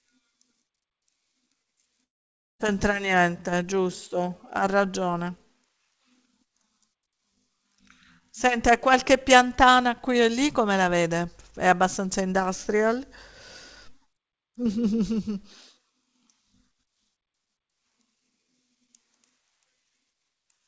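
A long network dropout runs from 2.04 to 2.61 s in this speech recording. The sound stops arriving cleanly and is replaced by a buzzy continuation of what came just before, which fades into near-silence. About 0.4 s of material never plays, and the speech resumes past the gap. This is likely a network interruption. The receiver concealed the hole by extending the last sound, gave up after a few tenths of a second, and then jumped ahead, leaving roughly 150 ms of extra delay queued in its buffer. Jitter buffer speed-up follows at 3.15 to 3.64 s, running at 109%, and again at 4.62 to 5.70 s at 108%. In both spans the speech sounds slightly hurried while its pitch stays put. To work off the backlog, the receiver snipped out tiny pitch-period-sized slices over and over, removing around 50 ms in the first span and around 100 ms in the second. Across the whole clip the call path's G.722 coding leaves nothing above 8 kHz.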